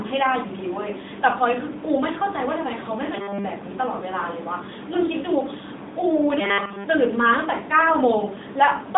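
From start to end, the speech carries AMR narrowband mobile codec damage. The band runs only from 200 Hz to 3.7 kHz. The voice sounds plainly buzzy and synthetic, as a vocal-tract model rebuilds it, which fits the 10.2 kbps AMR-NB mode.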